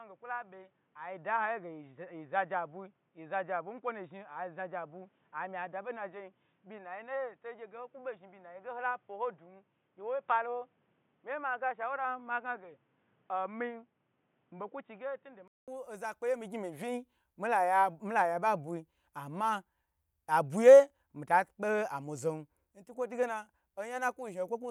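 For the first 15.68 seconds the speech sounds dull and boxy, with nothing above 3.8 kHz. It is also a few decibels quieter and carries a faint noise floor well below the speech. At 15.68 s a short silence of about 200 ms is followed by fuller, brighter sound. The likely cause is that the input switched to a poorer device, such as a headset in its call profile, for that opening stretch before returning to the better microphone.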